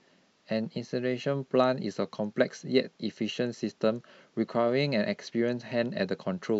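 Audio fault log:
Nothing in this speech recording catches the ear as a fault, so there's nothing to log here.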